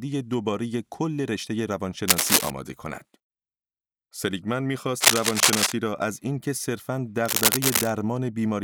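From 2.08 to 2.50 s, 5.00 to 5.72 s and 7.24 to 7.90 s, cable scratch noise rasps over the speech, roughly 5 dB above it, likely from a worn connector shifting its contact. Each burst shows as ragged broadband smears on a spectrogram and jagged spikes in the waveform.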